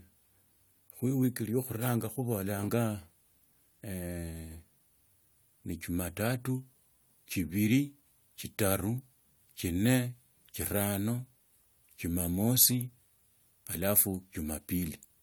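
No technical faults can be heard anywhere in the speech. There is nothing to place on the timeline.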